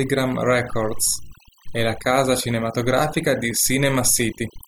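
Overdone noise removal runs throughout the speech: an over-aggressive noise reducer cuts bands near its noise estimate, leaving twinkling near-silence and taking quiet parts of the voice with it.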